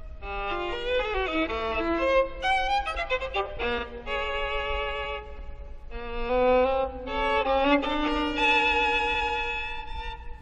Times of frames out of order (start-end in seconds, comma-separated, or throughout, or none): 3.78-3.83, 9.14-9.30